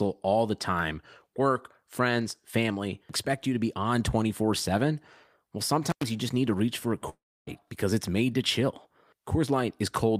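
At 5.90 to 6.03 s an intermittent contact briefly breaks the speech: a loose connection opens for about 95 ms, giving a crackle at each edge and faint hiss between. On a waveform, sharp spikes bracket a near-flat gap. A spectrogram shows vertical broadband streaks.

From 7.09 to 7.49 s the speech stops and the last sound trails on as a fading buzz or hiss before about 290 ms of silence. Speech resumes with roughly 380 ms missing, likely a long network dropout. The spectrogram shows smeared, decaying bands, then an empty stretch.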